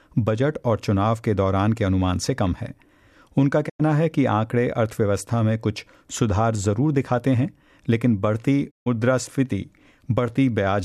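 At 3.68 s and again at 8.69 s the audio cuts out in a digital broadcast dropout: the receiver lost valid frames and muted, fading over 20 ms. The 96 ms and 144 ms holes, fitting four and six lost frames, show as flat waveform and blank spectrogram columns.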